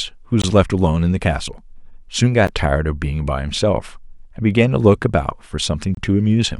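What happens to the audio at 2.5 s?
At 2.47 s the speech drops out for 13 ms. This is a gap at a join of encoded pieces, left where separately encoded segments were spliced with their start delay and end padding kept. The waveform shows a brief flat stretch with smeared edges, and the spectrogram a thin blank vertical stripe.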